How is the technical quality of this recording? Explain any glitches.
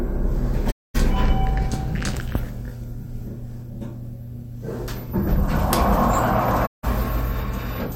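The recording is marred by two digital broadcast dropouts. At 0.70 s the receiver stopped getting decodable frames, whether the signal faded or frames failed their checksum, and muted until clean data returned at 0.96 s. A quick fade of about 20 ms takes the sound to silence for roughly 224 ms, and whatever was broadcast in that gap is gone. The same happens from 6.65 s to 6.85 s, a 160 ms hole with the same short fade.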